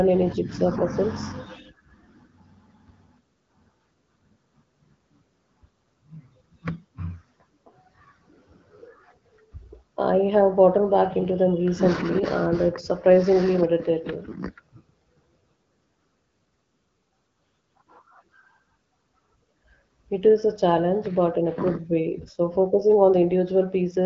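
No faults found; the speech shows the band limit of an AMR wideband (HD Voice) codec path, with nothing above 7.5 kHz, consistent with a mode around 12.65 kbit/s.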